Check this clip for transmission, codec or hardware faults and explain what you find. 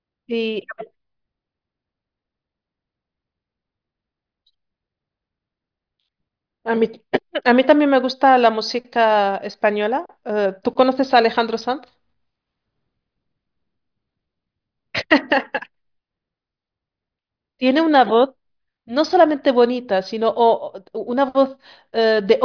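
No faults found in this recording.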